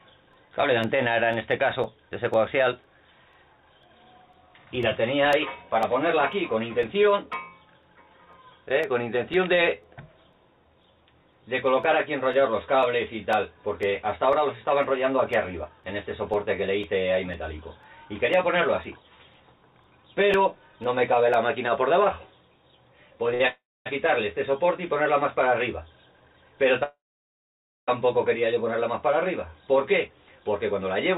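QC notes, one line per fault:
0.33–21.34 s, periodic USB or driver dropouts: roughly every 0.5 s, about forty times, a piece of roughly 2 ms drops to silence, heard as regular ticks while sound is present. Something blocking the USB bus or audio driver at a fixed interval causes it.
23.34 s, short stall from a late packet: the sound is held for 57 ms. A packet arrived late, the jitter buffer emptied, and the receiver stretched the last sound until it came, then continued from the same place, losing nothing.
23.48–23.88 s and 26.84–27.90 s, call audio freeze: the last sound carries on and fades, then goes silent for 250 ms and 920 ms, inserting 378 ms and 1040 ms of gap before the audio resumes where it stopped. Packets were likely held up in transit, emptying the jitter buffer.
29.15–30.82 s, jitter buffer speed-up: the audio runs at 107% speed with unchanged pitch and sounds hurried. The buffer held excess audio, so the receiver removed pitch-period-sized pieces, about 150 ms in all. 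This happens within G.711 mu-law call audio band-limited to 4 kHz.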